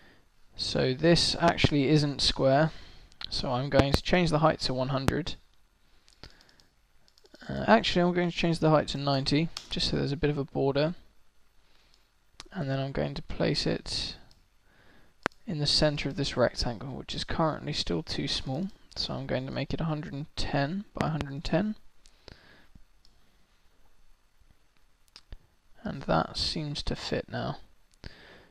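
Loud pops break into the audio as double thumps at 1.48–1.67, 3.79–3.97 and 21.01–21.24 s, and as single pops at 5.08–5.11 and 15.26–15.29 s, peaking about 20 to 25 dB above the sound. The likely cause is voltage spikes from a switch, plug or static discharge. They show as tall waveform spikes and full-height vertical streaks on a spectrogram.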